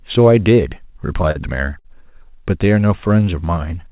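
Short stalls from a late packet occur at 1.31–1.37 s and 1.79–1.87 s. Each time the jitter buffer ran dry, so the receiver held the last sound for about 40 ms and then 56 ms before resuming in place, leaving a brief smeared hold with nothing lost. A jitter buffer slow-down follows from 2.95 to 3.25 s, where repeated pitch periods add 43 ms, so the speech drags at 88% speed without dropping in pitch. Throughout, the audio stops at 4 kHz, as expected for a narrowband call codec such as G.711.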